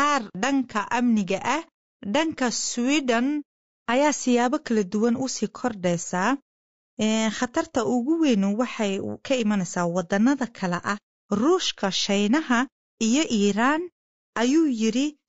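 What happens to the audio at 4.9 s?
At 4.9 s the speech sounds rough and grainy, with noise filling the gaps between harmonics and a thin, synthetic top band. That texture runs through the whole clip, likely from low-delay AAC compression (AAC-ELD), whose short frames blur pitch harmonics at a rate that fits about 32 kbps.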